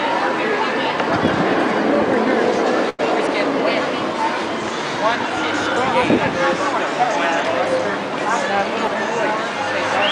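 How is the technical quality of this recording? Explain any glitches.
There's one glitch, a burst of packet loss at 2.89 to 3.01 s. Packets went missing or arrived too late, so the receiver filled about 92 ms by stretching the last sound and fading it down. Playback then picks up about 80 ms further along, so that bit is skipped.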